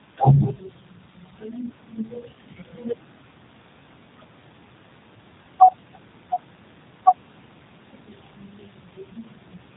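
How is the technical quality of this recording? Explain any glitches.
The quality's limited by plainly audible low-bitrate voice coding from start to finish. The G.729 codec is audible all the way through: the speech is rebuilt from a vocal-tract model plus a few pulses per frame, which fits an 8 kbit/s setting, so it comes out rough and a bit synthetic, with nothing above about 3.8 kHz, leaving everything dull and boxy.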